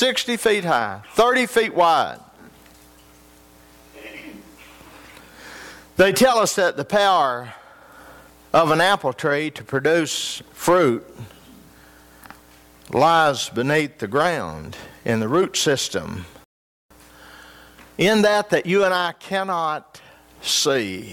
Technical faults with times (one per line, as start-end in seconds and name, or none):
16.44-16.91 rebuffering stall